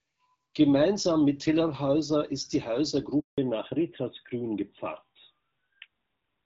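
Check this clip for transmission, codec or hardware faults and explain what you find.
Two faults stand out, both around the same moment: a handover gap in the call, followed immediately by a fallback to narrowband for the rest of the clip.

The handover gap runs from 3.20 to 3.38 s, right after "ist die". While the call switched networks no speech frames arrived, so the audio fades within a few tens of milliseconds and stays silent for 180 ms. Unlike a packet-loss dropout, the gap has no concealment buzz, and the bandwidth changes afterward.

The fallback to narrowband begins at 3.38 s and lasts to the end. Before it, the clear, light-artefact wideband sound fits AMR-WB HD Voice at about 12.65 kbit/s. After it, nothing is heard above 4 kHz and the speech turns duller and rougher, which points to an older narrowband codec. A lowpass filter would not add that coarse codec texture.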